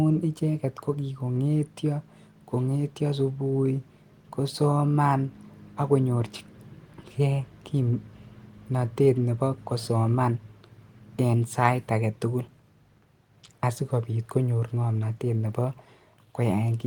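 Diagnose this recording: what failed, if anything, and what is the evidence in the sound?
Nothing stood out on listening to this speech recording, and no stage in the chain can be pointed to as having failed.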